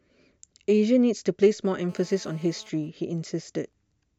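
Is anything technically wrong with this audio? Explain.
Yes, there are two faults. From 1.89 to 2.69 s, a GSM phone buzz sits about 29 dB below the speech. A nearby phone in a call pulses at 217 Hz, and the audio circuit rectifies those bursts into a steady, raspy buzz. Then, from 2.77 to 3.73 s, GSM signalling bursts appear. The phone's user has gone silent, so only brief burst groups get rectified. They form a faint pattern of even ticks with a longer buzz twice a second, roughly 40 dB down.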